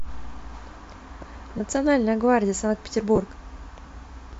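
At 1.58 to 1.60 s and again at 3.16 to 3.18 s, the speech has lost LE Audio frames. Each gap lasts about 20 ms, which fits two 10 ms frames of the LC3 stream, likely from the Bluetooth link. The decoder fills each gap by reusing the last spectrum with scrambled phase, so the sound smears briefly into a noisy blur. On a spectrogram, each gap shows as a thin vertical band of diffuse energy where the harmonic lines break up. On a waveform, it shows as a short stretch of irregular, noise-like samples.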